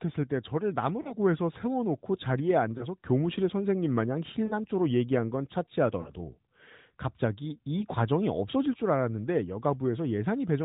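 Lost AMR speech frames hit at 1.02, 2.78, 4.46, 6.02 and 7.80 s. The decoder fills each gap from the last good frame, so you get a brief warbly dip each time.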